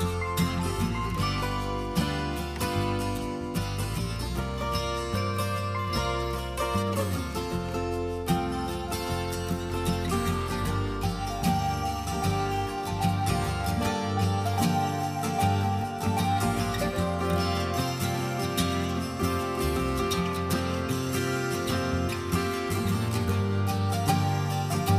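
No technical faults can be heard anywhere in the clip.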